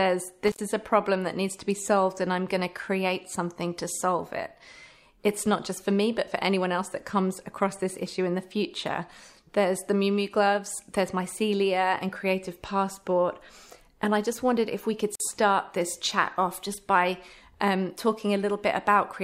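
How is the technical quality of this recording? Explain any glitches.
The recording has two brief breaks from an intermittent contact. Around 0.47 to 0.63 s and 15.14 to 15.20 s, a loose connection opens for about 68 ms and 49 ms, cutting the sound; the irregular spacing sets this apart from rhythmic buffer dropouts.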